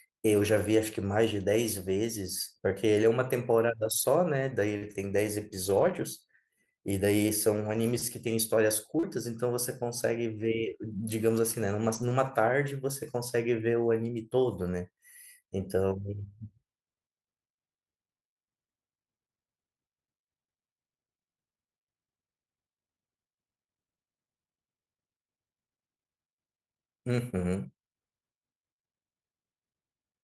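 Lost packets rebuilt from error correction run through the first half of this speech recording, at 3.77–4.03, 4.81–4.95, 5.65–6.03, 7.57–7.95, 9.03, 10.33–10.47 and 11.81–12.11 s, each lasting 20 to 200 ms. There is no gap at any of these points. Instead the sound turns briefly rougher and noisier, because each missing stretch was replaced by a low-bitrate backup copy carried inside the following packet, which fits Opus in-band forward error correction. Short concealed packet loss also occurs at 4.77–4.83 and 8.99–9.05 s, each right next to one of the rebuilt stretches. There, roughly 40 ms of audio never arrived, and the receiver bridged the hole by extending the preceding sound before blending back into the real signal, which leaves a brief smear or wobble at each spot.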